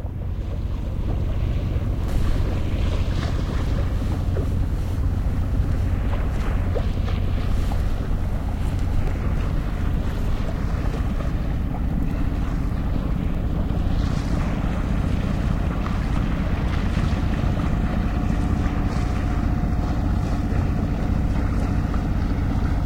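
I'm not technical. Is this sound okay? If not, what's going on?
Yes, nothing in this sound stood out as a problem when I listened to it.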